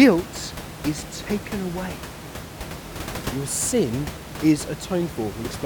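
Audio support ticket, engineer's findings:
No findings: no system fault detected in this speech recording.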